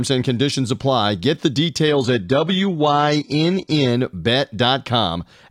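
A speech recording where an adaptive stream drops to a lower bitrate from 1.88 to 3.88 s. The connection slowed, and the switch sounds like a step down to low-rate HE-AAC. Nothing remains above 11.8 kHz, codec artefacts rise, and the change is abrupt, with no gap.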